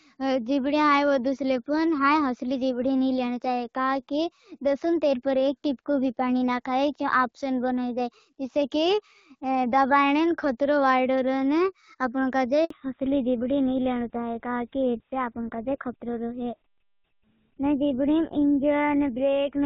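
At 12.64 s a handover gap cuts the speech for 60 ms: no frames arrive while the call switches networks, so the sound drops to silence until 12.70 s. From 12.70 s to the end the call falls back to narrowband. Everything above 4 kHz is gone, and the speech sounds duller and rougher than the earlier wideband section, consistent with a GSM full-rate codec.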